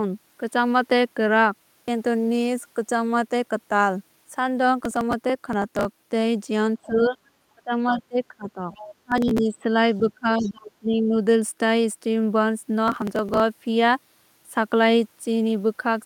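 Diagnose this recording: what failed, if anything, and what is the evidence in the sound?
Processor overload crackle (driver or buffer stage): gritty tearing at 4.80–5.85, 9.12–9.39 and 12.88–13.40 s, where tiny buffers, around 1.5 ms, were skipped in rapid succession.

Speech suppressed in double talk (call processing): the speech dips by about 15 to 25 dB at 6.76–7.17, 7.55–8.70 and 9.01–11.14 s, likely the echo canceller ducking during overlapping talk.

Other side's voice leaking through (call processing): faint second-voice fragments at 6.83–7.18, 7.90–8.03, 8.49–8.94 and 10.11–10.51 s, about 20 to 35 dB below the speech, likely uncancelled loudspeaker echo.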